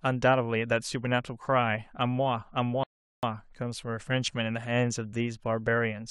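At 2.84 s the speech halts in a rebuffering stall: playback drained its downloaded audio, falling silent about 0.39 s, then resumed exactly where it stopped, showing as a flat, empty gap across all frequencies.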